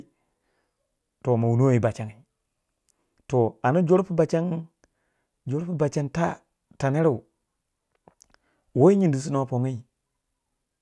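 Speech recording with no audible technical faults anywhere.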